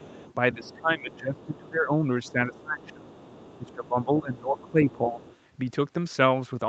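A faint second voice sits far beneath the main speech from the start to 1.58 s, again from 2.24 to 3.88 s and from 4.34 to 5.36 s. This is other side's voice leaking through, likely the far end's loudspeaker playback reaching the microphone and not fully cancelled by the echo canceller.

The main speech repeatedly sinks by roughly 15 dB: a brief dip in the first 0.05 s, then longer stretches from 0.54 to 1.96 s, 2.28 to 3.06 s (where it falls nearer 20 dB), and 3.58 to 5.2 s, largely overlapping the leaked voice. This is speech suppressed in double talk, likely the echo canceller failing to separate the talker from that overlapping echo and turning both down. The speech ends at about 8 kHz, as expected for this call path.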